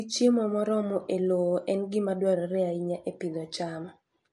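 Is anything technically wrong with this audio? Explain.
Yes, the speech has plainly audible MP3 compression throughout. Nothing comes through above about 11.3 kHz, and the treble sounds watery and swirly, likely from an encoder short on bits dropping weak frequency lines frame to frame, which fits roughly 48 kbps.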